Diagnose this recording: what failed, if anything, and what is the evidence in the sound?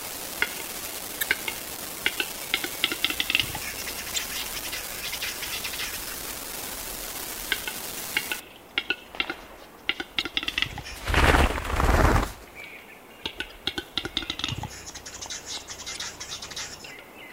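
An unreliable data bit at the converter or interface stage puts a steady crackling fizz over the sound from 0 to 8.4 s, continuing through quiet stretches. One marginal data line flips at random, and each flip adds a spike of the same height. On the waveform these are isolated, equal-size needles; on a spectrogram they form a broadband speckle.

Damaged data in the compressed stream, a codec or storage fault, produces short blips at 1.19–1.23, 4.14–4.18, 10.20–10.22, 13.50–13.52 and 15.93–15.97 s. The decoder misread corrupted frames, lost sync and skipped ahead to the next header. Each shows as a brief smeared block on the spectrogram and a discontinuity in the waveform.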